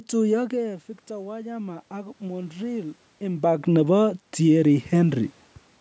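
From 0.34 s to 3.73 s the automatic gain control is rising: the input level fell by about 12 dB, and the control responded by raising its gain gradually, by about 6 dB over those three-plus seconds. The speech and the room noise behind it therefore swell together rather than the speech alone coming back up. Because only about half the drop is recovered, the speech still sits lower than at the start.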